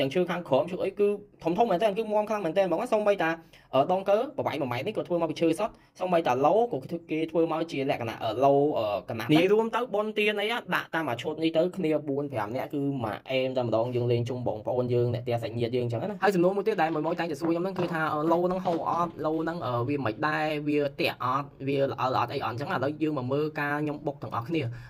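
No technical faults are audible.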